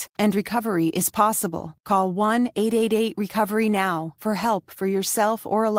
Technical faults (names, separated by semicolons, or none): clock drift between sender and receiver; repeated timing corrections